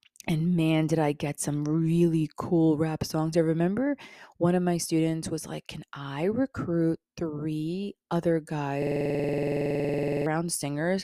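From 8.82 to 10.26 s, just after "i recruit three other", a system hang loop occurs. The system froze while the hardware kept replaying one 46 ms piece, which fits a 2048-sample buffer. It cycles at 21.5 Hz as a rattling stutter. Roughly 1.5 s of speech is lost.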